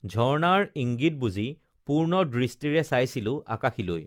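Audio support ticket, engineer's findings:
Swirly, hollow, smeared speech across the whole clip, consonant attacks blurred; far worse than one pass at around 96 kbit/s AAC-LC would sound. Generation loss, likely about ten decode/re-encode cycles, each requantising on a shifted frame grid, noise and spectral holes compounding.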